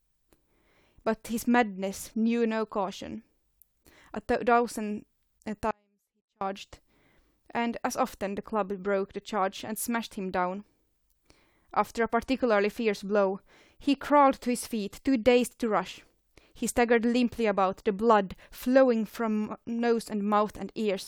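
At 5.71 s the speech drops out abruptly and returns at 6.41 s, an audio dropout to a faint residue lasting 0.70 s. Only a faint sound, roughly 40 dB below normal, remains in the gap, likely because the signal was lost while the path downstream stayed live.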